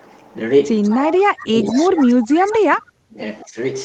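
From 0.82 to 1.19 s, a faint delayed copy of the speech trails the original by 199 ms, at about 15 dB below it. This is likely an echo leak. A far-end loudspeaker's sound reached its microphone, and the echo canceller let some of it back.

From 0.91 to 3.18 s, the speech keeps dipping, thinning and cutting out, for roughly 2 s in total. At its worst it falls by around 30 dB. This is likely speech suppressed in double talk. Both sides spoke at once, and the canceller, unable to tell talker from echo, turned both down.

Two more echo scraps, at 1.97 to 2.06 s and 2.46 to 2.56 s, are stronger, at about 10 dB below the speech. They keep the same 199 ms lag.

From 3.44 to 3.57 s, a brief second suppression drops the level by around 15 dB. The band-limited Opus call path can be heard throughout.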